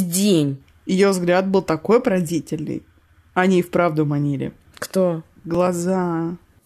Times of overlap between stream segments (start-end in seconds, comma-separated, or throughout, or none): 5.55